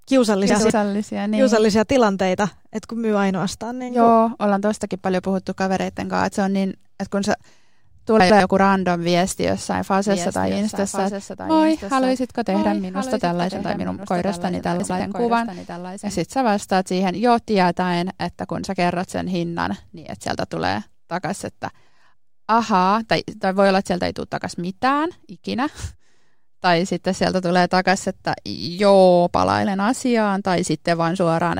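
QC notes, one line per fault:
0.5–0.7 s, 8.2–8.4 s and 14.8–15.0 s, chunks out of order: in each span a 100 ms block plays one block late, after the block that should follow it. The swapped order and three hard joins make a brief jumbled stutter, just before "niin kiusallisia tilanteita" and "joku random viesti jossain".
10.07–16.21 s, doubled audio track: after "joku random viesti jossain", a full-band second copy of the speech runs about one second behind and roughly 10 dB quieter, with no decay or room colour. It cuts in and out abruptly, ending before "sä vastaat siihen jo", likely a slower second capture path mixed in.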